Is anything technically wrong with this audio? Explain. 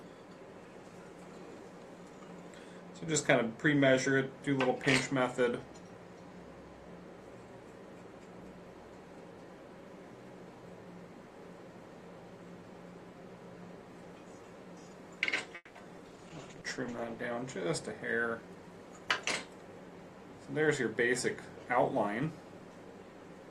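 Yes, three faults follow one another. From 15.55 to 16.04 s, repeated packet loss leaves robotic, choppy sound: the last sound is stretched over four gaps, the longest 200 ms, unlike a clean dropout's plain silence.

From 16.08 to 17.33 s, a call bitrate drop makes the audio rough, watery and muffled, consistent with coding falling from about 48 to 13 kbps. Nothing goes missing, unlike packet loss.

From 17.69 to 19.27 s, a jitter buffer speed-up trims short pitch-period pieces, about a fifth of a second in all. The sound runs about 12% faster but keeps its pitch, unlike a resampling error.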